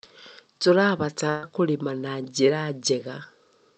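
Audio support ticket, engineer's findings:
Burst of packet loss, 1.29 to 1.45 s. Speech dropout of about 140 ms, bridged by concealment for about 130 ms. No silence. The last sound is extended and faded, heard as a held buzz or decaying hiss. Speech resumes later, with the middle missing. Probable component: network transport and jitter buffer. Call path audible as band-limited to 8 kHz, which points to an Opus stream at around 64 kbps.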